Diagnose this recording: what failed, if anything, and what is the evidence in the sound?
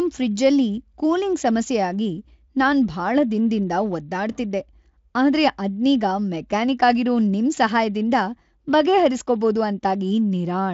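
No fault in any stage.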